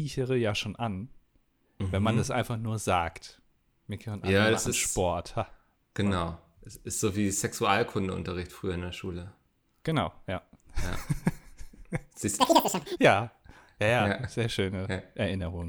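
It's a speech clip, and the trouble comes late: from about 12.40 to 12.97 s the audio is read two samples at a time, so it plays at double speed. For that half-second the reader treats each pair of samples as a single frame, as if the stream were stereo or twice as wide, so everything rushes by at 2x and jumps a full octave, 12 semitones, higher.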